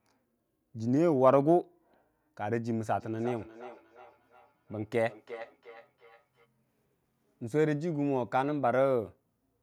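From 2.95 to 6.49 s, feedback echo between two devices: each word returns roughly every 400 ms, peaking at about 18 dB below the speech. Unlike room reverberation's smooth tail, these are discrete repeats, picked up from a second device's loudspeaker, which the echo canceller cannot remove.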